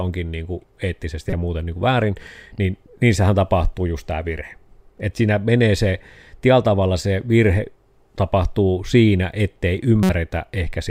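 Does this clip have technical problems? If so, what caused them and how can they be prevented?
Yes: a corrupt frame decoded at 1.30–1.33 s and over roughly two frames at 10.03–10.10 s. Flipped bits misplace energy, causing loud artifacts with error peaking around -5 dBFS that appear as brief, off-pattern bright vertical smears. Protect the stream with error checking and conceal or drop damaged frames instead of decoding them.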